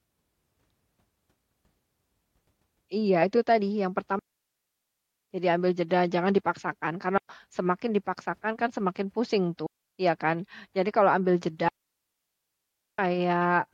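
At 4.19 s the speech drops into a clean hole of near silence lasting about 1.1 s, the first of four digital wireless dropouts. Shorter gaps follow at 7.18 s (about 0.12 s) and 9.66 s (about 0.32 s), and the longest, about 1.3 s, begins at 11.69 s. Each time the receiver lost too much data and muted with a very brief fade. No noise burst, crackle or hiss precedes or follows any gap, which separates this from an analogue wireless dropout.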